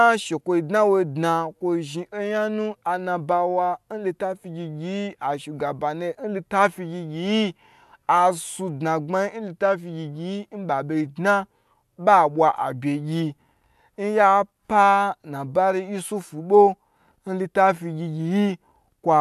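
No technical faults are audible.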